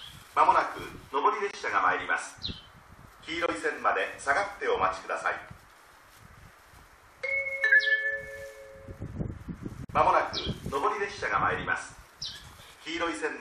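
At 1.51 s the audio drops abruptly into silence for about 36 ms, then resumes on time. This is a corrupt frame muted: a damaged compressed frame was rejected by the decoder and the player substituted silence. The same hole returns at 3.46 s for about 44 ms and at 9.85 s for about 68 ms, lengths that point to two consecutive frames lost each time. On a waveform these appear as flat silent gaps with sharp edges. On a spectrogram they are clean vertical bands empty across all frequencies.

At 7.71 s a short error of about 30 ms cuts in, peaking around -10 dBFS. This is a corrupt frame decoded: bit errors in roughly one frame were not caught, so the decoder played it, and misread gains and codes placed energy at frequencies where it does not belong. The waveform shows a brief, jagged spike. On the spectrogram a narrow vertical smear of misplaced energy lasts just one frame length.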